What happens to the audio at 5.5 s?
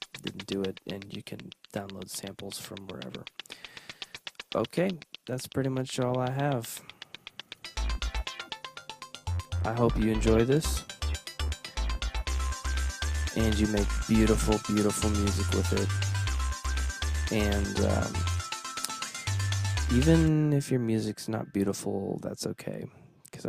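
Nothing goes wrong at 5.5 s: the audio plays through that moment intact, with no dropout, click or other fault.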